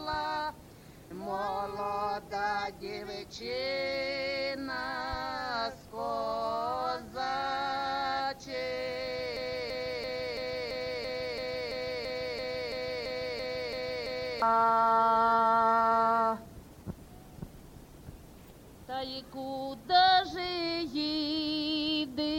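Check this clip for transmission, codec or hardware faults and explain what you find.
One fault is present: a broken-record loop. From 9.37 to 14.42 s, a 0.34 s fragment repeats exactly, back to back, 15 times. The likely cause is a stalled player, encoder or stream resending its last buffered piece. The audio due in that span is lost.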